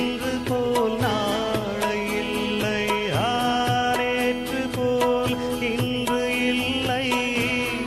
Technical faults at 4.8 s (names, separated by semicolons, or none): feedback whistle